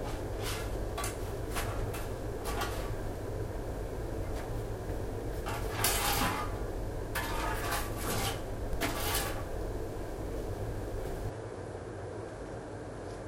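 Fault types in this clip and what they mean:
Input switched to a poorer device: at 11.29 s the sound changes character with no gap and stays that way to the end. The band now stops near 11.4 kHz, so the top end turns duller, the level drops by roughly 5 dB, and a different background noise floor appears, around 50 dB under the signal. The likely cause is the recording path moving to a different, more limited input device mid-capture.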